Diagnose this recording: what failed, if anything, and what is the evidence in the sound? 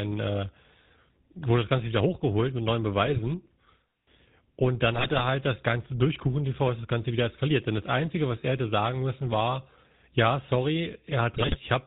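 The speech passes through the GSM full-rate codec for the whole clip. It sounds buzzy and gravelly, with nothing above 4 kHz. That fits the 13 kbit/s GSM full-rate codec.

GSM bit errors on the transmission link cause squawks and gargling at 3.05–3.20, 4.93–5.24 and 11.34–11.57 s. Corrupted filter, pitch or gain values are distorting the decoded frames.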